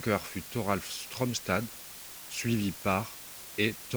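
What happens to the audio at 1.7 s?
At 1.7 s, as throughout the clip, low bit depth with dither lays a constant, even hiss roughly 15 dB below the speech. Dithering the 6-bit rounding turns the error into steady white noise instead of the gritty, signal-following distortion of undithered truncation.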